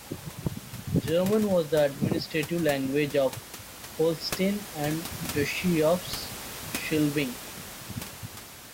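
No technical faults are audible in the speech, and the steady room noise sitting about 13 dB beneath it belongs to the recording space rather than the system.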